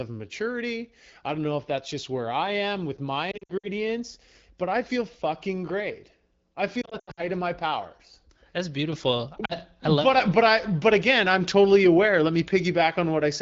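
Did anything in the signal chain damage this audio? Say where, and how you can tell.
Yes. Lost AMR speech frames (network/radio stage) at 3.31–3.69 s after "I am with my", 6.81–7.24 s after "feel fucking great I" before "of my powers", and 9.45–9.55 s. Short scattered dropouts, with the longest runs 60 ms and 80 ms, make the decoder repeat stale pitch and vocal-tract settings at falling gain, which you hear as brief warbles and dips.

Sudden gain jump at 8.93 s, lasting to the end of the clip. Speech and background noise step up together by about 6 dB in a single sample, with no ramp. The likely cause is a call-processing gain setting applied instantly, and it is unrelated to the wideband codec underneath.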